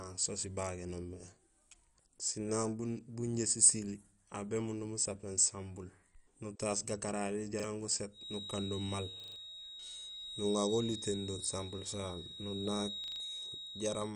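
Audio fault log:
Throughout: MP2 compression. The sound is dull and nothing is heard above 11.2 kHz. Upper bands drop in and out, and what remains has a gurgling, granular edge. This is likely MPEG Layer II starved of bits, which fits a rate around 48 kbps.
7.60–7.64 s, 9.20–9.36 s and 13.04–13.20 s: repeated buffer. A short slice plays again with a hard join at each repeat, which fits a 40 ms buffer. At 7.60 it is one quick stutter. At 9.20 and 13.04 it is a longer stutter. Each time some audio goes missing, roughly a few hundredths of a second at first, then about a sixth of a second.
8.10 s to the end: feedback whistle. A thin, steady tone at 3.8 kHz sits behind the speech, about 10 dB below it, and swells and fades slowly in level. This is likely a loudspeaker-to-microphone loop held just short of runaway, so one frequency keeps ringing.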